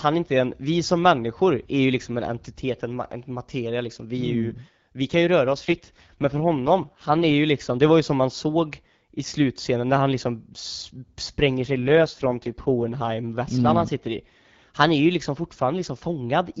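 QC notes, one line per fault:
5.46–7.34 s and 11.65–13.10 s, AMR rate drop: after "mm vi kan ju" and again before "vesslan mm han sitter", speech turns rough and buzzy, then clears at "liksom det var ju". This points to the AMR-WB codec stepping down from 12.65 to 6.6 kbit/s. The bandwidth stays the same and there is no gap, but the coarser vocal-tract and pulse coding sounds synthetic. On a spectrogram, harmonics smear and the upper band goes noisy while the top edge holds. The waveform stays continuous.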